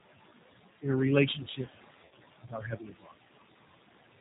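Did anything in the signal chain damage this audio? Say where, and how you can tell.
Yes. Noise suppressor artifacts from call processing run throughout. The room noise, sitting about 10 dB below the speech, drops by about 18 dB in pauses and returns under speech. Unlike a simple noise gate, the reduction varies band by band.

The G.729 codec stage damages the whole clip. The audio is band-limited to 4 kHz with a rough, synthetic edge and a warbling background, which fits an 8 kbit/s G.729 stream. A narrowband telephone filter alone would not add that gritty, rebuilt texture.

VoIP packet loss concealed by the speech codec affects the network stage from 2.05 to 2.13 s. The sound smears and fades, and then recovers slowly. That pattern points to about 60 ms missing, likely two packets, which the decoder extrapolated rather than leaving as a clean dropout.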